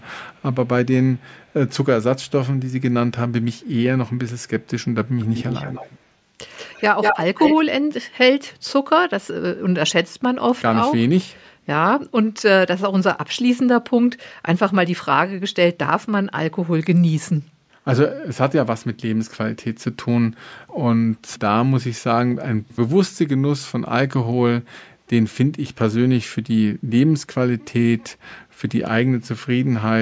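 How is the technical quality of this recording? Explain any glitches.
The speech carries an echo leak in the first eight seconds, where a delayed copy of the talker's own voice returns. Frequencies stop at 8 kHz, consistent with call microphone processing.

The echo leak appears at 0.32–0.67, 1.17–1.24, 1.4–1.69 and 3.42–3.7 s as a very faint copy trailing by 257 ms. At 5.19–6.0, 6.57–6.82, 7.01–7.19 and 7.37–7.57 s it returns after 185 ms, much stronger and near the speech's own level around 7 s. This is likely a far-end loudspeaker whose echo canceller let its microphone pickup through. Unlike room reverberation's smooth tail, this is a distinct repeat.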